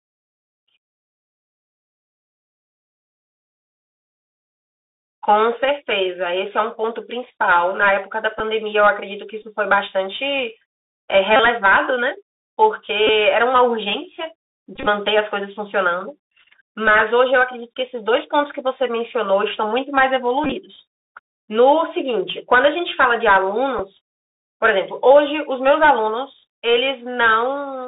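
Throughout the speech, the Bluetooth CVSD headset codec holds everything to roughly 300 Hz to 3.7 kHz. Its one-bit up-or-down steps, consistent with a 64 kbps stream, leave a granular hiss underneath, scratchy s sounds, and distortion where loud high content outruns the adapting step.

Bluetooth headset packet repeats occur at 8.39, 9.42, 11.36 to 11.40, 13.07, 14.76 to 14.86, 20.44 to 20.53 and 23.79 s. Lost packets are replaced by re-decoding the previous packet's bits, giving small ticks in the shortest gaps, a 30 ms buzz near 267 Hz at 11.36 s, and broken buzzy patches in the scattered clusters, whose longest runs are about 20 and 30 ms.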